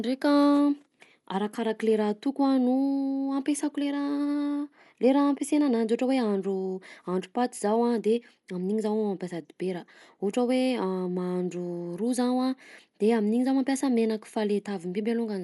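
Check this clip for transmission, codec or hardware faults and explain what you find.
There's one fault, and it runs through the whole speech clip: audible coding damage that's likely Dolby Digital compression. Nothing comes through above about 11.4 kHz, so the top end sounds dull, and there's a rough, fluttery noise hanging around the tonal parts. At a tight rate, which here fits roughly 64 kbps, the encoder trims the band and leaves many frequency lines without mantissa bits, so the decoder fills those gaps with dither noise.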